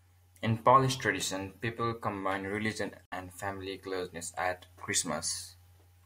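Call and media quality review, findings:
Digital broadcast dropout, speech, 3.06 to 3.12 s: abrupt mute of about 64 ms between "tradition people combine religion" and "family closeness at". Probable component: receiver/decoder. Mechanism: frames lost or failed checksum, output muted until valid frames resumed. Duration fits roughly two lost frames of about 32 ms each. Audio sent during the gap is unrecoverable, so that stretch of speech is missing, not delayed.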